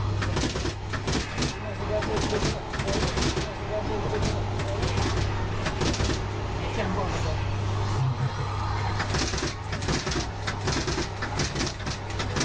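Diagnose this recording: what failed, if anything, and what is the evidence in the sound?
A second capture path likely fed the signal in twice: from 1.80 to 7.20 s, a doubled audio track, equally loud and abrupt, trails about two seconds behind.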